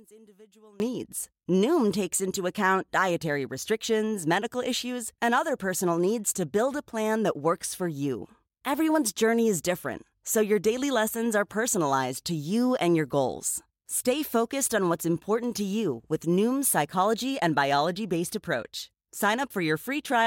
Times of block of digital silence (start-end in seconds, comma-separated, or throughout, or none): none